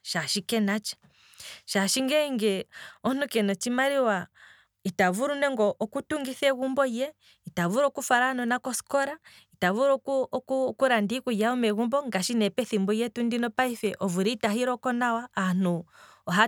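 Nothing in the speech stood out as a technical problem on listening.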